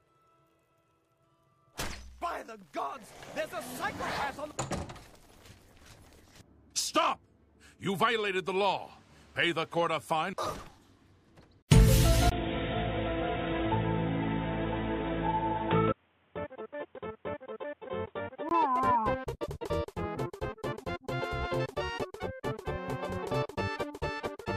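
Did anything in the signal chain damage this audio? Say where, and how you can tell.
Yes. At the driver level, the input was likely switched to a poorer device from 12.3 to 18.5 s. A 20 ms gap marks the change. After it, nothing reaches above 3.8 kHz, so the sound turns dull and boxy, drops a few dB in level and carries a different, faint noise floor.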